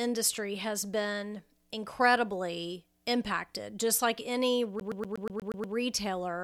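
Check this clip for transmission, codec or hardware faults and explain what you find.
One playback fault is present. From 4.80 to 5.76 s, a CD is stuck on one turn. A scratch throws the laser back each revolution, so one 120 ms slice of speech repeats eight times with brief mutes, producing a fast, even stutter.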